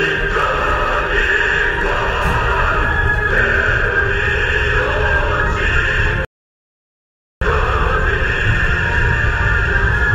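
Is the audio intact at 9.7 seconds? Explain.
Yes, the audio is intact at 9.7 seconds, with no fault at that point.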